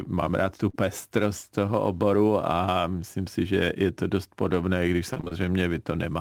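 At 0.69 to 0.75 s, just after "mám rád tu", there is a short concealed packet loss. About 40 ms of speech arrived too late or not at all. The receiver extended the preceding sound to cover the hole. It is heard as a brief smear.

From 5.13 to 5.34 s, right after "to dost podobné když", there is repeated packet loss with robotic sound. Five gaps fall close together, the longest 23 ms. Nearly half this stretch is patched audio. The speech turns choppy and mechanical.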